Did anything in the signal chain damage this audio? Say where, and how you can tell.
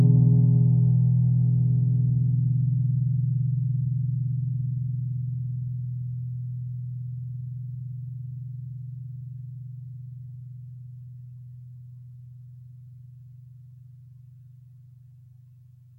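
No, nothing in the signal chain has damaged this recording of sounds. No stage, from capture through to playback, shows audible damage anywhere in the clip.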